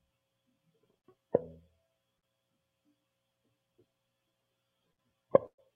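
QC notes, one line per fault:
0.97 to 1.06 s, 2.17 to 2.25 s and 4.92 to 5.00 s: burst of packet loss. About 60 ms of music goes missing each time. The receiver stretches the last sound for roughly 50 ms and turns it down, so a brief held buzz or fading hiss replaces the music before it picks up slightly further on.
5.46 to 5.61 s: burst of packet loss, longer than the others. About 120 ms of music is lost. Concealment holds and fades the last sound across the gap, and about 80 ms of it drops to silence, so the music decays into a short dropout and then resumes with a jump forward.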